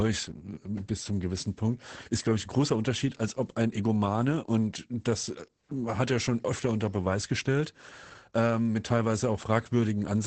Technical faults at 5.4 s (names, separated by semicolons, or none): Opus voice compression